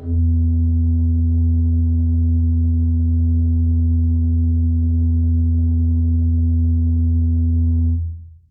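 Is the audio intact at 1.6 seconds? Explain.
Yes, the music is intact at 1.6 seconds, with no dropout, click, distortion or other fault at that moment.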